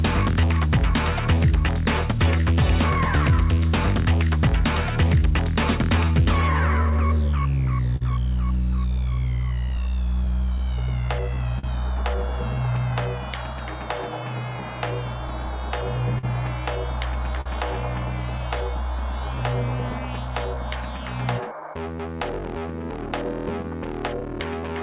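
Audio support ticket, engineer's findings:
Clock drift between sender and receiver, whole clip. Sender clock running roughly 3% slow against receiver. Jitter buffer keeps draining, so playout has to stretch the stream to stay in step. Probable component: sender audio clock versus receiver playout clock.

Repeated timing corrections, 0.41 s to 24.75 s. Playout running at about 98% speed, about half a second added overall. Receiver repeating short pieces at uneven intervals to cover the slow sender. Probable component: jitter buffer time-stretching.

Short stall from a late packet at 7.96–8.03 s (45 ms), 16.18–16.25 s (47 ms) and 17.41–17.48 s (45 ms). Sound held slightly too long each time, nothing lost. Buffer ran empty, last sound extended until the late packet arrived, delay rising by the same amount.

Scattered short gaps, 9.69 s to 11.65 s. About four brief hiccups, the longest around 50 ms, roughly a tenth of a second concealed in total, nothing missing. 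Late or lost packets, each patched by continuing the previous sound. Probable component: packet loss concealment. Band limit at 4 kHz from the call codec, consistent with a G.711 mu-law path.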